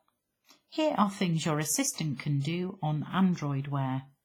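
Speech runs through the whole clip with heavy transform-codec damage. The sound rings and washes, and a grainy hiss rises and falls with the voice rather than sitting at a steady level. Weaker spectral detail drops out, leaving a thin, hollow timbre. The cause is likely WMA compression at a low bitrate, and the depth of the damage points to something around 24 kbps. Ordinary background noise keeps a constant floor, while this hiss exists only where the signal does. Between 2.40 and 2.45 s there is a pre-echo: a burst of hiss about 45 ms long arrives just before a sharp attack, and the attack itself sounds softened and smeared. That short lead-in is the codec's noise for the loud onset spreading back across the whole transform block into the quiet gap. An ordinary echo follows the sound it copies and repeats its character, but this hiss comes first and is shapeless.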